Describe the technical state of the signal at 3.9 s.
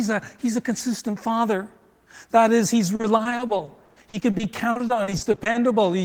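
At 3.9 s the signal sits inside repeated packet loss (robotic sound), spanning 2.95 to 5.57 s: 27 short gaps, up to 60 ms, are patched by extending prior audio, giving choppy speech with pieces missing.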